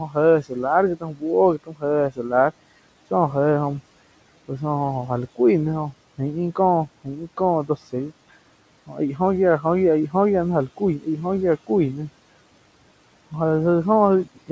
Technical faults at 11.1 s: speech cut by the noise suppressor

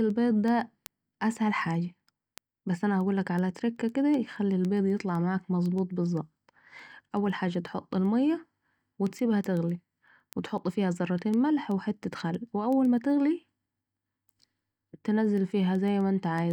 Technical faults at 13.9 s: word clock ticks

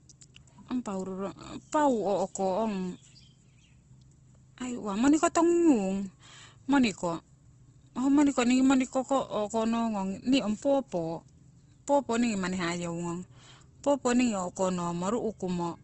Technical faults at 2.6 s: low-bitrate audio saved at a high bitrate

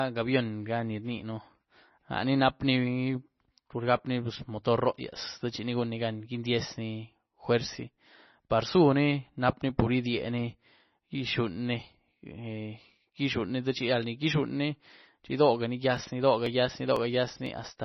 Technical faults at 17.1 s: MP3 compression; periodic USB or driver dropouts

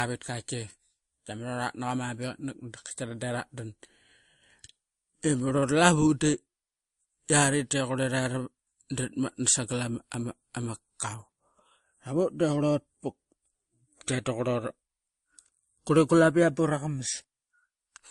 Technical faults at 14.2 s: transcoding between lossy codecs

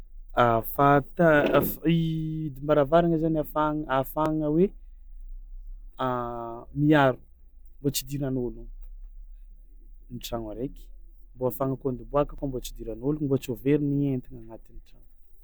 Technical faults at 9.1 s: none

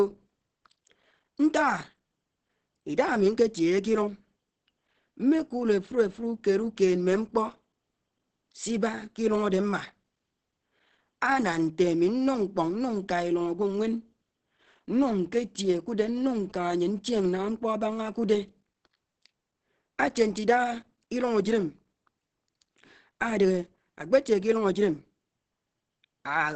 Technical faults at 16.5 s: Opus compression; GSM signalling bursts

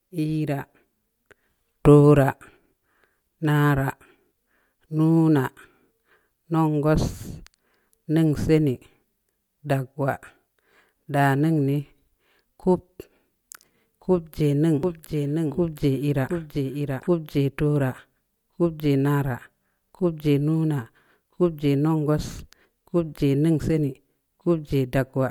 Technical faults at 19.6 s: none

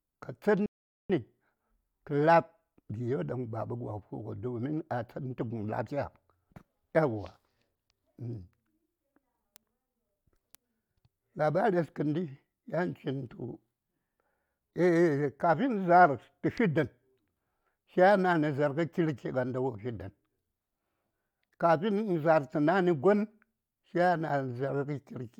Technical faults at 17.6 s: none

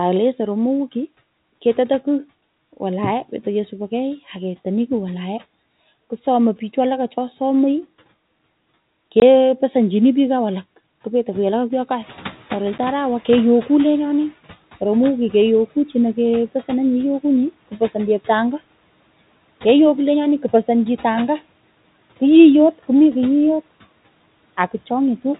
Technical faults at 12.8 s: noise suppressor catching up; packet loss filled with silence

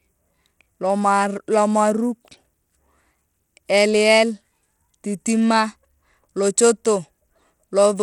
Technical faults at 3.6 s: Bluetooth SBC compression

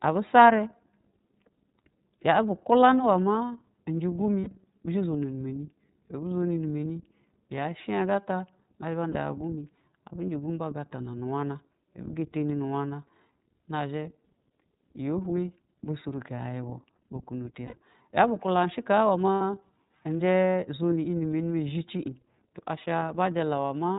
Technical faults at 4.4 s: iLBC codec; lost iLBC frames

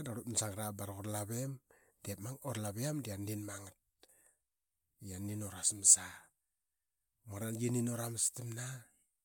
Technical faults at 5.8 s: none

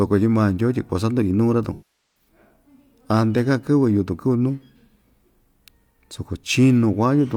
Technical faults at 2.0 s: AAC frame loss with concealment

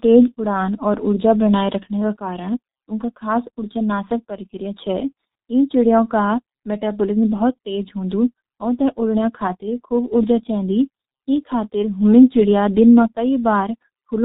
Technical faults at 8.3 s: G.723.1 codec

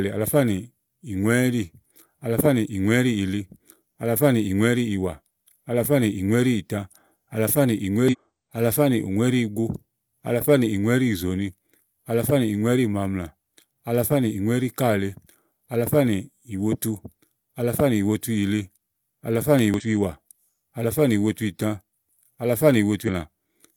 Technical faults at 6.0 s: none

